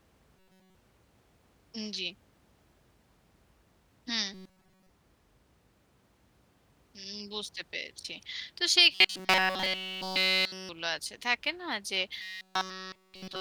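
New audio likely arrived too seldom, so a roughly 5.3 ms buffer was replayed over skipped sound. The result is robotic sound from repeated short buffers, a rigid metallic 188 Hz buzz, at 0.37–0.75 s, 4.34–4.90 s (partly), 8.93–10.69 s and 12.22–13.41 s.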